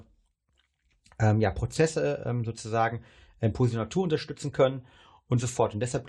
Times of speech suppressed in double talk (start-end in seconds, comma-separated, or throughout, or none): none